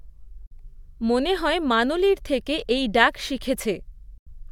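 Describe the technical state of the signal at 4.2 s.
At 4.2 s the speech drops out completely from 4.18 to 4.28 s, a Bluetooth dropout whose likely cause is audio frames, about four of them, failing to reach the headphones in time. The waveform shows a flat gap with abrupt or briefly faded edges and the spectrogram a clean vertical blank before the speech resumes as if it had played on.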